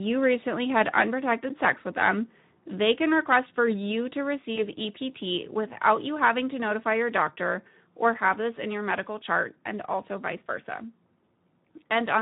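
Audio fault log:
Throughout: Speex codec. The whole clip carries plainly audible Speex coding damage, at a rate that fits roughly 11 kbps. With so few bits left to describe the excitation signal that drives the vocal-tract filter, the codec rebuilds the voice from a coarse approximation, so the speech comes out noisy and hoarse, and any high band present sounds like shaped hiss rather than real detail.
4.55 to 4.61 s: VoIP packet loss concealed by the speech codec. A single lost frame, 20 ms of audio, was filled in by the decoder carrying forward its last pitch and spectral envelope while turning the gain down. That substitute segment sounds like a brief buzzy or noisy smear in place of natural speech, and because each decoded frame leans on the one before, the voice stays weakened or distorted for a short stretch after the audio resumes.
6.23 to 6.29 s: microphone overload. The loudest peaks here overshoot the converter's ceiling by about 3 dB, and a small share of samples, around 2 percent, are flattened at the limit. 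Squaring off the waveform tops adds harsh odd harmonics, heard as a crackly, gritty edge on the loudest syllables. Too much input gain at the microphone is the likely cause.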